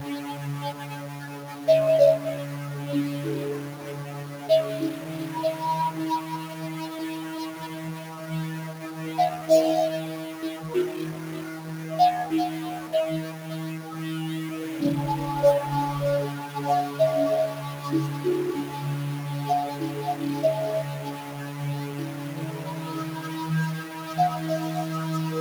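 Right from the start there's a noisy, distorted edge on everything, and the quiet gaps fill with hiss; that's a stuck bit, likely one data line jammed at 0 or 1 in the converter. Running alongside it for the whole clip, a noise suppressor built for speech is clamping down on held sounds and tails, so the audio pumps and thins, dropping by around 10 dB.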